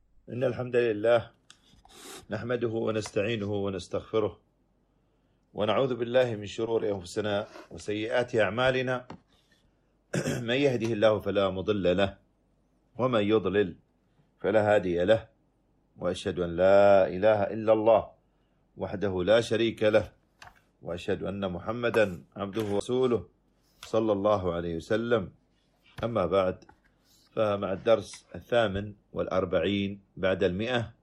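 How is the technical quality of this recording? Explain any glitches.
Two glitches interrupt the recording.

At 6.66 to 6.72 s there is a short glitch where the sound lurches forward. This is compressed frames being skipped: a few frames, consistent with 10 ms frames, roughly 30 ms of audio in all, never reached the output.

At 22.8 s a very brief dropout of about 10 ms marks a CD skip. The laser jumped onto another turn of the disc's spiral, so the player muted momentarily and resumed from a different point in the audio.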